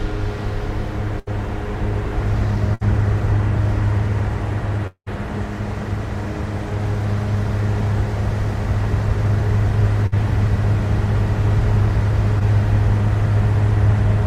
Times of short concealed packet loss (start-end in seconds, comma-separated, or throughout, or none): 12.39-12.42